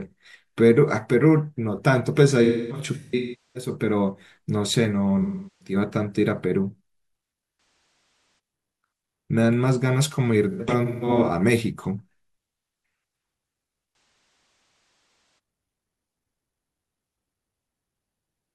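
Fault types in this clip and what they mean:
AAC frame loss with concealment: lost coded frames patched from the last good spectrum, heard as smeared, phasey dropouts in bursts up to about 1.5 s; spectrograms show blurred, stretched bands.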